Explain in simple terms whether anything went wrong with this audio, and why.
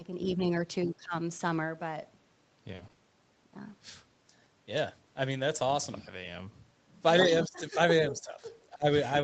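A few things did go wrong, all typical of a call connection.

At 0.36 to 0.40 s, 0.85 to 1.14 s, 7.47 to 7.79 s, 8.11 to 8.38 s and 8.72 to 8.86 s, the voice suddenly ducks in level or partly drops out. That's speech suppressed in double talk, and the likely cause is both people talking at once. The echo canceller couldn't tell the talker apart from the other side's sound coming back through the loudspeaker, so it turned everything down. The first dip is barely there. The ones near the end, around 7.5 s and 8.8 s, pull the voice down hard.

From 2.75 to 2.99 s there's a short choppy patch. That's repeated packet loss. Chunks of the audio stream went missing several times in a row, each hole lasting up to 40 ms. The receiver plugged each hole by stretching the last bit of sound, and then the next hole arrived straight after. In total, roughly 40 percent of that quarter second is patched-in sound.

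Around 5.55 to 5.61 s you won't hear a gap, just a brief rough, slightly noisy moment. That's a lost packet rebuilt from error correction. What you hear suggests two separate packets went missing. The packets that followed carried a cheap, lower-quality spare copy of the missing audio, and the decoder played those copies instead. So the sound keeps going, but it comes out a bit grainier for about 40 ms.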